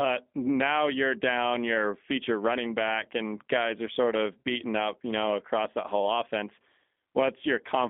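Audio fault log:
throughout: G.729 codec. The speech sits in a narrow line band from about 200 Hz to 3.5 kHz. It has a plainly rough, synthetic grain because each 10 ms frame is rebuilt from a vocal tract filter, a pitch predictor and sparse pulses, which fits an 8 kbit/s G.729A stream.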